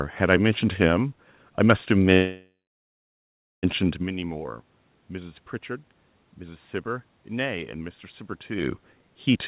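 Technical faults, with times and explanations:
2.14 to 3.65 s, call audio freeze: the speech stops abruptly and the last bit of sound is stretched into a buzzy tail that fades out, leaving about 1.1 s of near silence before the audio comes back. The likely cause is packets held up in transit, so the jitter buffer ran dry and the receiver filled about 1.5 s on its own. When the audio resumes it picks up right where it stopped, so nothing is lost, but everything after is about 1.5 s late.
9.33 s to the end, jitter buffer speed-up: the last moment of speech suddenly rushes at about 156% speed while the pitch stays the same. The buffer had more audio queued than it wanted, so it cut out tiny slices one or a few pitch periods long, back to back, about 70 ms in total, to win back the delay. Because whole pitch periods are removed, it sounds hurried rather than higher-pitched.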